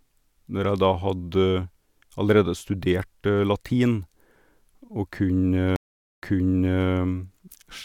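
At 5.76 s the speech cuts to silence for 0.45 s, then resumes 0.65 s earlier, repeating material: a stream reconnect, where a fresh decoder restarted mid-stream.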